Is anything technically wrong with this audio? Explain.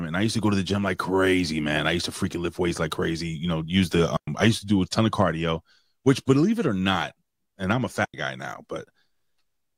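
Yes. The speech has two digital wireless dropouts. The first runs from 4.17 to 4.27 s, a mute of about 108 ms. The second runs from 8.05 to 8.14 s, about 91 ms long. In each, the wireless receiver lost too much of the incoming data and muted its output with a very fast fade. The result is a clean hole of near silence. There is no burst of noise, click or hiss on either side of it.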